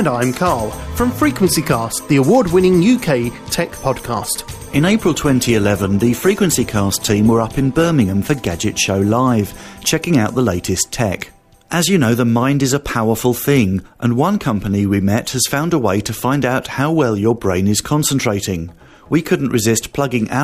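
From 3.93 s to 7.93 s the audio abruptly takes on a more artefact-laden texture, then snaps back, with no gap at either edge. This is an adaptive stream at a lower bitrate, consistent with a drop from around 64 to 24 kbit/s Opus during a four-second connection slowdown.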